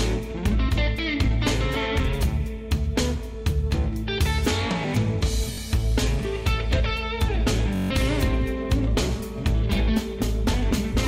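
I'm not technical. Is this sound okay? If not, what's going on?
No. There are two moments of Bluetooth stutter. At 5.53 to 5.58 seconds there is a brief hiccup, and at 7.76 to 7.91 seconds a longer buzzing, machine-gun rattle. The wireless link dropped data, so the receiver kept replaying its last tiny slice of sound. Unlike a plain dropout, which goes silent, this fills the gap with repeats, and afterwards the sound jumps ahead as if it had kept playing.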